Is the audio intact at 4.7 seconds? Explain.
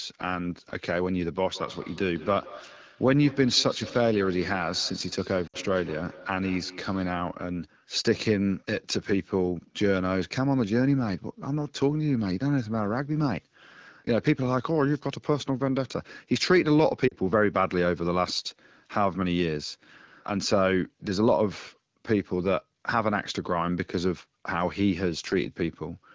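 No. At 4.7 s, feedback echo between two devices (1.46–7.29 s) loops one device's playback into the other's microphone. It repeats about every 150 ms at about −17 dB, showing as faint, evenly spaced copies trailing each burst on the spectrogram.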